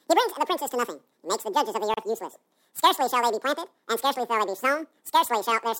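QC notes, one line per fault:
throughout: audio read two samples at a time (double speed). Playback runs at 2x with pitch raised 12 semitones, a full octave, because the reader takes each sample pair as one frame. This points to a channel-count or sample-width mismatch.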